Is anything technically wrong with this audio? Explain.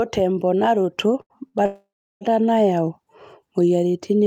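Yes. Short stalls from a late packet at 1.21–1.33 s and 1.48–1.57 s: the jitter buffer emptied, so the last sound was held for 85 ms and 57 ms, shown as a smeared, flat spectrogram stretch. A call audio freeze follows at 1.66–2.24 s, likely from packets held up in transit. A fading buzz and then about 350 ms of silence add a 552 ms gap, seen as a flat waveform before the audio resumes.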